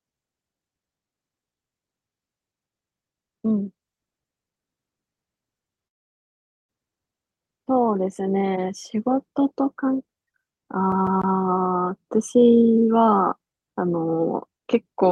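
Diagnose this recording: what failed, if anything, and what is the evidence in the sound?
A call audio freeze sits at 5.87 to 6.71 s. The speech stops and the gap is almost entirely silence for about 0.8 s. When it resumes, it picks up exactly where it left off. Nothing is lost, but everything after it now runs about 0.8 s late. The stage is the network. Packets were likely held up in transit, so the jitter buffer ran dry and the receiver filled the wait.

From 10.92 to 11.36 s the playback is a CD stuck on one turn. A single 0.15 s fragment repeats three times, with a brief mute at each jump. The stutter is fast and perfectly even. That regularity points to storage and playback, not to the network. A scratch sends the laser back one track at the same point on each revolution, so the same slice of audio replays until the pickup gets past it.

A jitter buffer speed-up runs from 12.18 s to 15.07 s. 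The speech moves about 9% fast, yet its pitch does not rise. It sounds hurried. Over that stretch roughly a third of a second of audio is taken out. The stage is the receiver's buffer. It had built up more audio than its target, so it trimmed many short pieces, each one or a few pitch periods long, to pull the delay back down.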